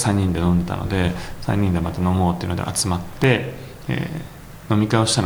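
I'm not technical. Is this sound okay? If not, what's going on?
No. From 3.03 to 3.24 seconds there is a short burst of processor overload crackle. The computer handling the audio got too busy. It works in very small chunks, each just under a thousandth of a second. During that moment it missed a handful of them. Each missed chunk became a tiny hole of silence with sharp edges. Strung together, those holes sound like a gritty crackle on top of the sound. It stops once the load eases.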